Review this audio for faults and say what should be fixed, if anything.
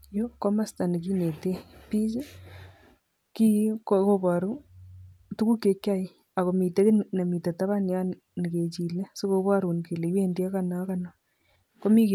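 Nothing here needs fixing, since the speech comes across without any technical faults to flag.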